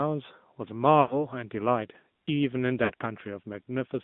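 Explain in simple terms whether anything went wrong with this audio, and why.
The voice sounds thin, buzzy and boxed-in throughout, with no crispness on top. That's the AMR narrowband mobile codec: a phone-call speech squeezer that discards high frequencies.

Around 1.02 to 1.27 s and again at 2.84 to 2.92 s, the sound smears and fades, then returns rough. These are lost AMR speech frames: radio errors wiped short chunks, and the decoder patched them by stretching what came before.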